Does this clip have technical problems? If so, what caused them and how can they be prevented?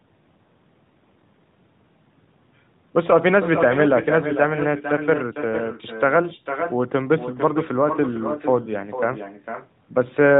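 Yes. Every phrase throughout is trailed, roughly half a second later, by a thinner copy about 9 dB quieter. This is echo with no canceller: the far end's loudspeaker feeds its microphone. Turning on acoustic echo cancellation at that end, or having that caller use a headset, would prevent it.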